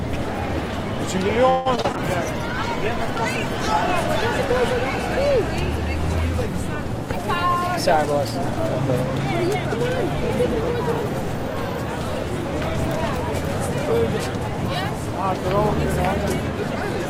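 A recording of everyday sounds with a stretch of repeated packet loss (robotic sound) from 1.49 to 1.96 s, where short gaps, the longest about 161 ms, are patched by stretching previous audio. Roughly half that span is concealed, giving choppy output with pieces missing. A call bitrate drop follows from 1.96 to 3.94 s, with the encoder falling from 48 to 17 kbps, so the sound turns coarse, watery and muffled as high frequencies are cut.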